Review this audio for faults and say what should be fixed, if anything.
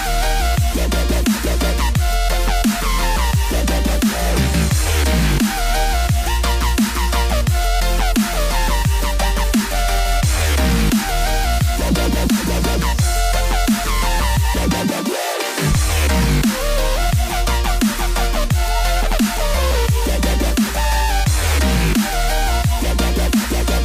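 Nothing here needs fixing; the audio holds together nicely all the way through, with no faults to flag.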